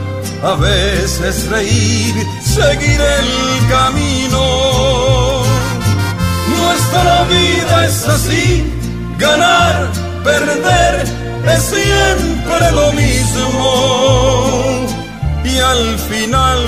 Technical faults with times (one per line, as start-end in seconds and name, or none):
none